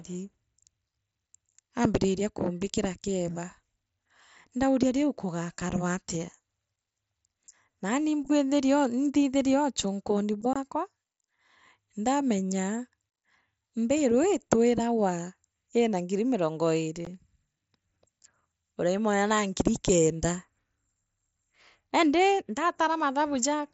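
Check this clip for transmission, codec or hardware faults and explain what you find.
Unconcealed Bluetooth headset packet loss occurs three times: at 5.70 s, from 10.53 to 10.56 s, and at 17.05 s. Voice packets between headset and phone went missing, and nothing filled the gaps. The result is abrupt dropouts of about 7.5, 22.5 and 15 ms, consistent with one, three and two lost mSBC frames, each with hard, possibly clicking edges. The mSBC wideband link itself carries the speech up to 8 kHz with light graininess.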